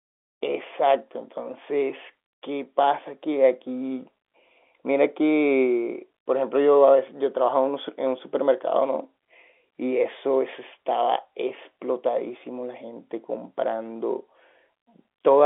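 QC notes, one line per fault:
Nothing to flag here, just ordinary G.711 telephone speech sitting in the narrow line band of about 300 Hz to 3.5 kHz, with no faults turning up anywhere in the recording.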